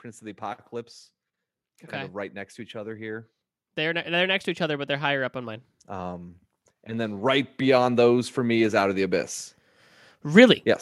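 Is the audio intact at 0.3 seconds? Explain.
Yes, the speech at 0.3 seconds plays through cleanly with no audible fault at that moment.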